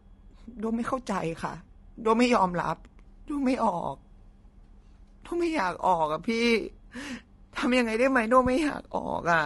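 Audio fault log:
throughout: low-delay AAC compression, likely AAC-ELD at a rate fitting about 32 kbps; too few bits leave noise between the pitch harmonics, leaving the speech plainly rough and grainy.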